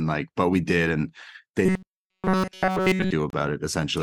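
A speech recording, 4 seconds long, with two faults. From 1.66 to 3.13 s the voice becomes a rigid, metallic robotic buzz at 188 Hz, with essentially all of that stretch made of repeats. The likely cause is repeated short buffers: audio arriving too seldom, with roughly 5.3 ms loops filling the time. At 3.30 to 3.33 s a 29 ms gap with smeared edges opens mid-sound, a gap at a join of encoded pieces, where separately encoded segments were spliced without trimming encoder delay and end padding.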